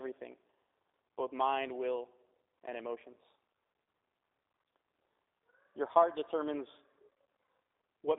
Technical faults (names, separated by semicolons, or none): G.729 codec